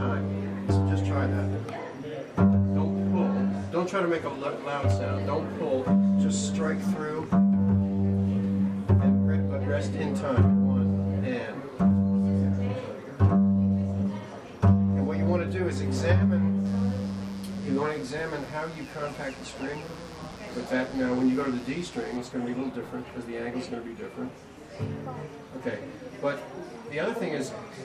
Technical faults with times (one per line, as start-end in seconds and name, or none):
16.66-22.17 mains buzz